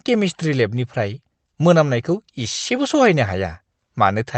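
No technical faults can be heard in the speech at any point. It has passed through a call path that behaves as expected, with the usual coding texture of a call codec and high frequencies ending at about 8 kHz.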